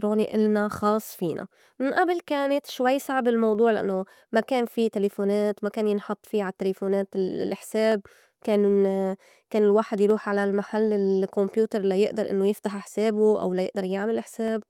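Clocks between two devices likely drift apart by roughly 70 ppm, causing clock drift buffer slips: from 1.37 s, after "إلنا خاص", a click recurs every 2.19 s until 14.48 s.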